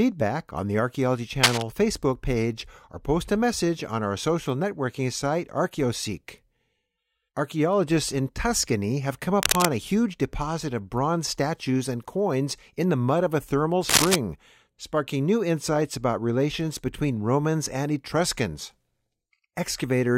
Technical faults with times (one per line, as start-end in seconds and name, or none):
1.43-1.62 cable scratch noise
9.40-9.69 cable scratch noise
13.89-14.16 cable scratch noise